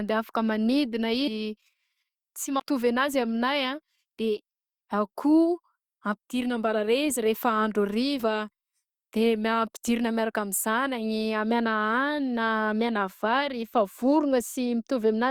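Speech with compressed frames skipped: whole 20 ms frames went missing or were rejected as damaged, so the audio jumps ahead roughly 200 ms after "afak manidina" at 1.27–1.30 s, about 100 ms before "anazy aminahy" at 2.59 s, and about 40 ms at 8.19–8.23 s.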